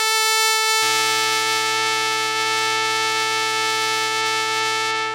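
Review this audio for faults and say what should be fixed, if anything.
From 0.82 s to the end, periodic clock jitter modulates the converter clock at around 1 kHz, adding paired sidebands that give the music a metallic, rough edge. Unlike random jitter's broad noise haze, these are discrete tones, strongest on high-frequency content. Preventing it means isolating the converter's clock from nearby interference, using a clean reference and proper shielding.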